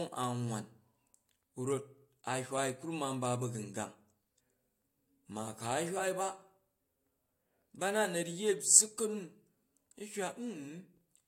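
No technical faults can be heard anywhere in the speech recording, and the signal stays steady and intact throughout.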